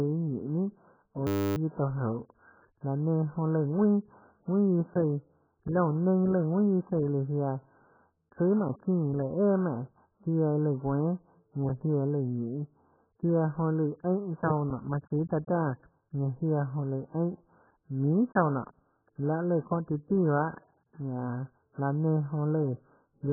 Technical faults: AAC compression; system hang loop; gap between chunks

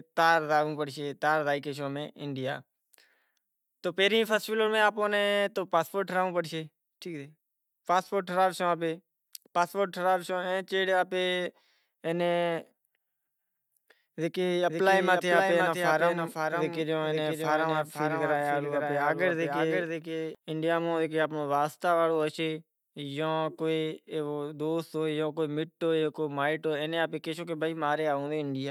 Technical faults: doubled audio track

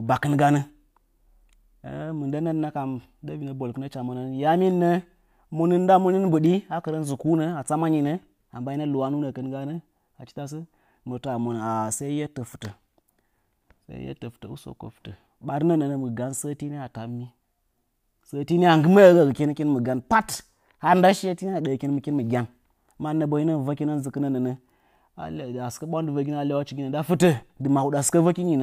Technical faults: none

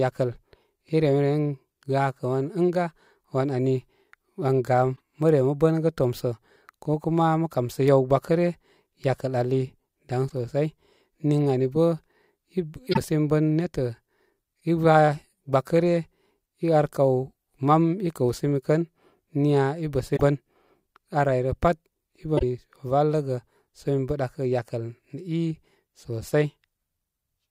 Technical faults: damaged data in a compressed stream

